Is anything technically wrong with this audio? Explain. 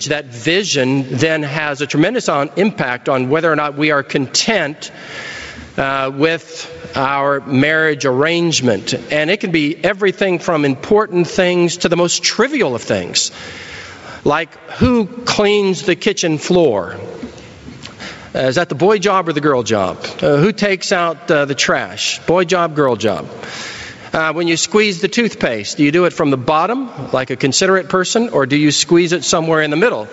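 Yes. Two faults can be heard.

Gain pumping runs through the whole clip. The level swings by about 25 dB. Loud and quiet parts end up squeezed close together, so the sound feels flattened and breathing. The likely cause is input gain set far too high for the microphone, with a fast limiter or compressor clamping it down on every peak.

Periodic USB or driver dropouts occur from 21.98 s to 23.78 s. A small piece of audio goes missing every 0.1 s, about twenty times in that stretch. Each loss is a tiny fraction of a millisecond. The missing audio is skipped rather than filled with silence. The result is a steady train of ticks, heard only while there is signal. The even spacing points to a background task stalling the USB bus or audio driver at a fixed interval.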